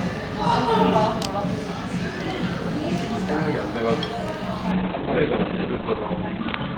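At 4.72 s a call bitrate drop sets in and lasts to the end: the encoder's budget falls from 48 kbps to 6 kbps, holding at the lowest rate for about 1.26 s. The audio band shrinks from 20 kHz to 4 kHz, so the sound turns muffled and rough, with a watery, smeared texture. A simple low-pass filter would dull the top just as much but leave the remaining band clean, without this coarse, grainy coding.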